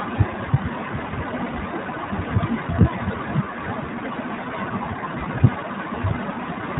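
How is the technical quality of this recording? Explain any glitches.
The recording has limited technical quality: the speech sounds dull, boxy and slightly rough or synthetic for its whole length. That is iLBC codec damage, present throughout and plainly audible. Nothing above 4 kHz survives, which removes the crispness from consonants. The codec rebuilds each 20 ms frame's excitation independently, without relying on the previous frame, and its low-rate coding gives the voice its faintly buzzy, artificial texture. This fits iLBC's 15.2 kbps mode.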